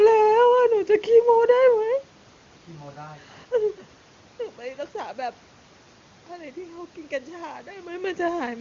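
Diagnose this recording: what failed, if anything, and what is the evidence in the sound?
Nothing has failed here: the room's background noise and the level changes around 3.5 s and 7.5 s, where the talker seems to move relative to the microphone, are simply part of the recording, and the HD Voice codec is running at its top rate of 23.85 kbit/s.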